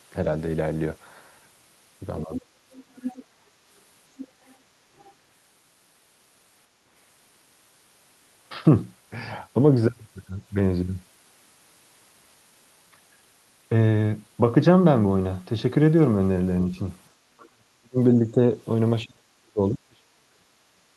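From 2.25 to 2.46 s the speech dips by roughly 15 dB for a total of about 150 ms. This is speech suppressed in double talk. With both sides talking at once, the echo canceller likely could not tell this talker from the loudspeaker echo and pulled down everything it heard.

Shortly after, the other side's voice leaks through as a fainter second voice. It runs from 2.72 to 3.25 s at around 15 dB below the speech, from 4.17 to 4.55 s at around 20 dB below, and from 4.98 to 5.13 s at around 30 dB below. Each burst is likely residual echo of the far end's voice from this device's loudspeaker playback that the canceller failed to remove from the microphone signal.

Later the double-talk suppression returns much harder. From 17.35 to 18.4 s the speech is cut by as much as roughly 40 dB across about a second, so it nearly disappears. From 19.04 s to the end of the clip it drops again by roughly 35 dB. 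Both stretches point to the canceller likely clamping the whole channel while the far end was speaking.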